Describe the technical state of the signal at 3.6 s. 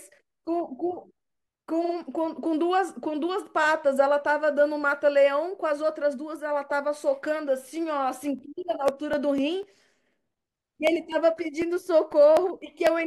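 At 3.62 to 3.65 s there's a repeated-frames glitch: a single 23.2 ms chunk of compressed audio plays twice, which fits one duplicated frame. You hear a quick stutter in the speech, and the clip runs 23.2 ms longer.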